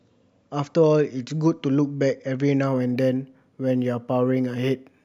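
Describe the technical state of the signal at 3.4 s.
Imaging from linear upsampling is present at 3.4 s, within a stretch running from 2.67 s to the end of the clip. The speech appears to have been raised in rate by straight-line interpolation between samples, which fits a conversion from 16 kHz to 48 kHz. That crude filtering dulls the top of the original band and leaves a faint mirrored copy of the spectrum between 8 kHz and 16 kHz, roughly 45 dB down. It comes through as a light metallic shimmer on sibilants.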